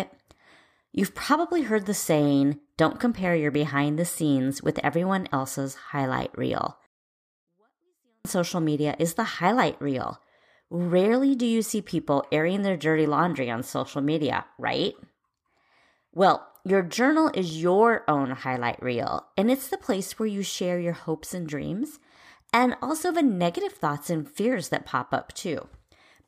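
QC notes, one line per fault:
6.86–8.25 s, 24-bit alignment error (too quiet): the speech abruptly drops by about 48 dB, falling almost to inaudibility, then returns to full level at 8.25 s. The sound stays clean throughout the dip, with no distortion or noise added. This fits 24-bit samples sitting in the low bytes of a 32-bit word being read as full 32-bit integers. The top eight bits of the word are empty, so each sample is read 256 times too small.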